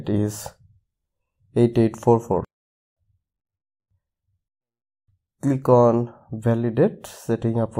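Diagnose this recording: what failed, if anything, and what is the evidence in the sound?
Nothing stood out on listening that would point to a failure at any stage of the chain.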